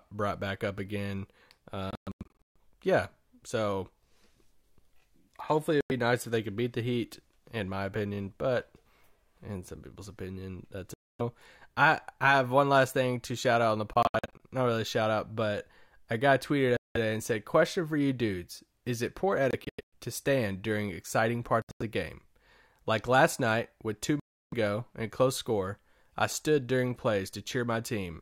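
The speech cuts to silence with hard edges at 1.91–2.56, 5.81–5.91, 10.94–11.21 (between "some people's opinion that's" and "I I have one"), 13.93–14.41, 16.77–16.97, 19.51–19.94, 21.62–21.82 (before "the game") and 24.20–24.54 s. Some gaps are a single hole and others a stutter of short breaks. The speech resumes further along, as if it had kept playing. This is likely a Bluetooth dropout, where late audio packets were discarded.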